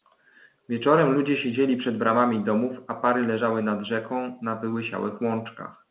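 No technical faults can be heard anywhere in this speech recording. It carries the narrow, band-limited sound of ordinary A-law telephone coding at 8 kHz, with nothing above 4 kHz and only the faint level-following hiss that format brings.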